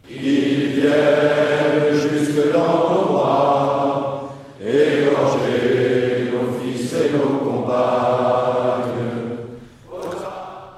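No technical faults can be heard anywhere in this audio. Nothing in it needs a time marker or a fix.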